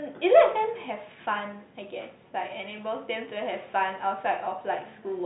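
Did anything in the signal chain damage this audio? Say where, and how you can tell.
No, nothing in the signal chain damaged this audio.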